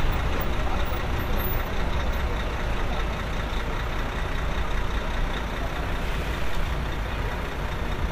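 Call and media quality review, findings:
No faults found in the everyday-sound recording. Nothing heard calls for a ticket entry.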